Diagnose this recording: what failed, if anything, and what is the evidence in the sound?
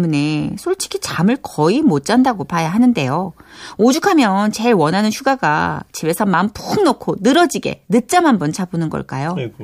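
Faint, evenly spaced ticks run through the speech from 0.21 s to 8.87 s, about ten in all, roughly every 0.7 s. These are clock slip clicks, likely from two converters on unsynchronised clocks about 30 ppm apart, each slip dropping or repeating one sample.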